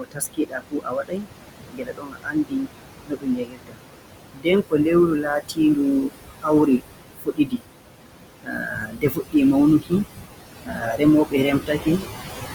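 Noise suppressor artifacts run throughout. The room noise, which sits only about 7 dB under the speech, is pulled down by about 21 dB between phrases and swells back under them.

Speech cut by the noise suppressor comes in three stretches: 0.0 to 7.64 s, with roughly four seconds affected and drops up to about 22 dB; 8.2 to 9.92 s, with about a second affected and drops up to about 20 dB; and 10.64 to 12.03 s, with half a second affected and drops up to about 19 dB. The suppressor treats soft speech as noise, so quiet endings and consonants sound swallowed rather than clipped or muted outright.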